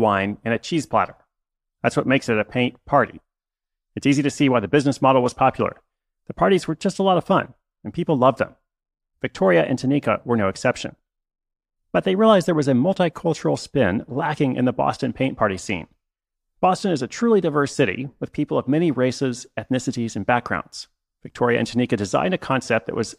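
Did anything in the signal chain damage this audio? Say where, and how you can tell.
No, nothing in this speech recording stood out as damage from any stage of the chain on listening.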